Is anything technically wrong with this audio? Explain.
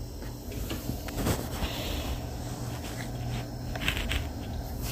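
Yes. At 1.08 s a sharp snap, peaking around -20 dBFS, sits on top of the sound, likely an electrical switching spike from a nearby switch or discharge arcing into the line.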